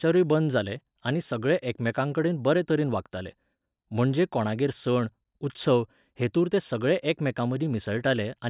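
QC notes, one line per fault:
Nothing to flag here; the speech comes across without a single problem worth noting.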